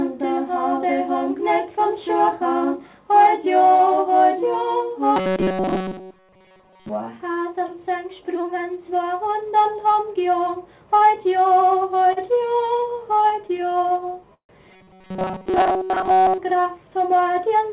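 Audio arriving too seldom is the likely cause of robotic sound from repeated short buffers from 5.16 to 6.90 s and again from 14.71 to 16.38 s. The playback side kept re-sending a segment of roughly 5 ms in place of most of the real audio, so a rigid metallic buzz at 188 Hz sits over the sound and only loosely tracks it. Between 12.08 and 14.52 s, packets repeatedly arrived late and the jitter buffer kept running dry, producing repeated stalls (stutter). More than twenty short gaps were bridged by stretching the last sound, about 404 ms in total (17% of that stretch), with the longest at 148 ms. Nothing is lost, but the audio drags and catches. From 17.36 to 17.69 s, jitter buffer speed-up drains a backlog by cutting out about 40 ms of short pitch-period pieces, so the audio runs at 109% speed at unchanged pitch and sounds hurried. Throughout, nothing is present above 4 kHz, which fits a narrowband G.711 call path.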